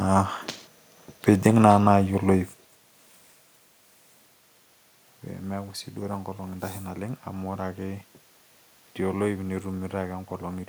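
No technical faults can be heard in this speech.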